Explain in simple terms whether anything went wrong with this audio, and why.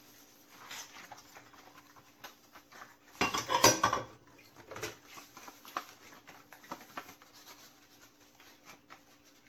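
Generation loss runs through the whole clip, from start to finish. The sound seems swirly, smeared and hollow, and sharp starts blur. It was likely squeezed and unpacked by a lossy format around five times, each round adding fresh damage.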